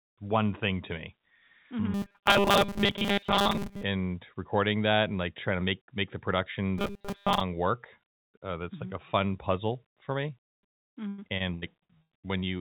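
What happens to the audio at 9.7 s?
Nothing goes wrong at 9.7 s; the speech carries on intact through the call path, which keeps its usual telephone-band sound with nothing above 4 kHz.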